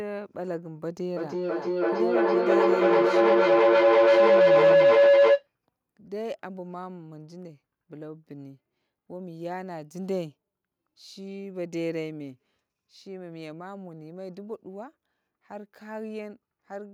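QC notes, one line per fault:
1.16–5.48 s, feedback howl. A tone near 500 Hz swells up and sits about 15 dB above the speech at its peak. It pulses roughly every 300 ms. Two devices in the same room are joined to one call. Each trip from loudspeaker back into microphone adds level. So the repeats grow instead of dying away. They narrow to the pitch the loop favours, and the pulse follows the loop's delay. The howl stops at 5.48 s, where the loop is broken.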